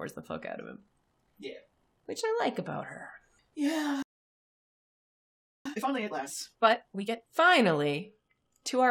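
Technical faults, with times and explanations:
4.02 to 5.66 s, playback stall: the speech cuts off in mid-flow and the output stays fully silent for about 1.6 s before sound resumes. This is likely the player running out of buffered data or having its output thread blocked. Unlike a dropout or gap in the recording, the silence is long. It is followed straight away by hurried playback as the player works off the delay.
5.66 to 7.28 s, time-compressed catch-up: straight after the stall the speech runs at double speed while keeping its normal pitch. The player is shrinking its backlog by dropping small slices of audio and cross-fading the joins, so the delay built up during the silence is cleared. A plain speed-up would raise the pitch. Here pitch is held.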